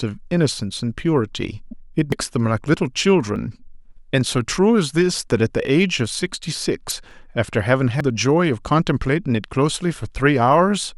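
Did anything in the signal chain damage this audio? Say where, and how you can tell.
Yes. Damaged data in a compressed stream at 1.69–1.73 s and 6.88–6.92 s: brief disturbances where the decoder misreads corrupted codec frames and loses sync.

Skips forward at 2.12, 3.36, 7.11 and 8.01 s, losing about 40 to 150 ms each, are likely a dropped buffer (overrun) at the driver stage.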